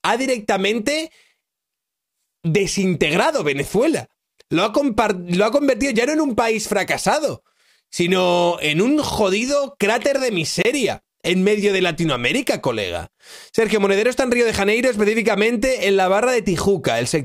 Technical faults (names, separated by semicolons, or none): Bluetooth stall